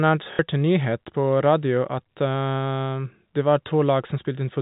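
At 0.33 s, just before "en nyhet på", the speech breaks into packet loss with the last packet repeated, lasting 60 ms to 0.39 s. The receiver fills the gap by replaying the final received packet. The short run buzzes at the packet rate, which fits two lost packets of roughly 30 ms each. It comes across as a brief robotic stutter within the 4 kHz-limited G.711 telephone band.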